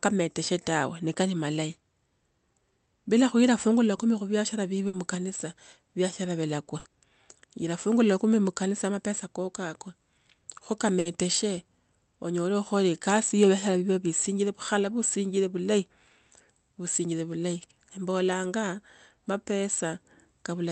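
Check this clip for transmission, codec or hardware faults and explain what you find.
Three short dropouts in the speech, all the same kind: a burst of packet loss. The call path itself sounds like Opus, its top end capped near 8 kHz, with a bitrate that fits about 32 kbps.

At 4.87 to 4.96 s (after "la kumi khu viashara", before "mukanisa viashara vilakwa"), 6.79 to 6.88 s (after "mukanisa viashara vilakwa") and 10.99 to 11.08 s, the receiver stretched the last sound for about 60 ms as a fading buzz or hiss, then jumped ahead, so another 60 ms is simply gone.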